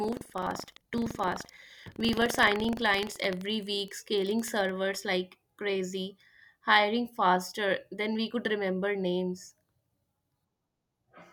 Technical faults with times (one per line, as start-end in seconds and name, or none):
0.00-4.72 buffer tearing